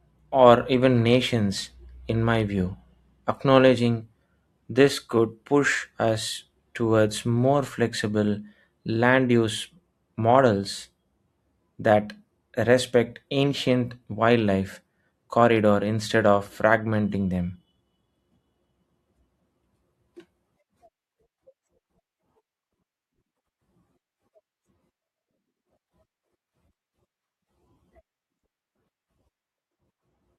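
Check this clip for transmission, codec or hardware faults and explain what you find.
No faults detected in this speech.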